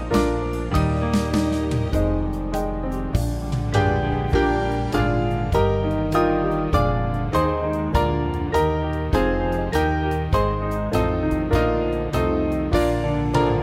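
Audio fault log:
No faults detected in this audio.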